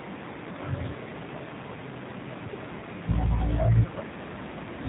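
G.729 codec damage runs through the whole of this speech clip, plainly audible. Everything above 4 kHz is gone, and the voice sounds rough and slightly synthetic, rebuilt from a vocal tract filter, pitch predictor and sparse pulses, which fits an 8 kbit/s coder.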